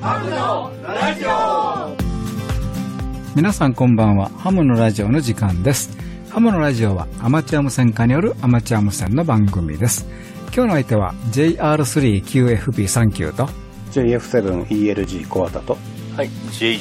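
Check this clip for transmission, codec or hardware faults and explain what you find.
Two short transport faults, both overlap between stream segments. At 9.07 s and 15.04 s, adjacent 6-second segments claim the same moment, so the player trims sound that was never duplicated. About 6 and 19 milliseconds vanish and the waveform jumps, producing a click or tiny skip. Unlike a dropout, nothing goes silent; the sound simply leaps forward.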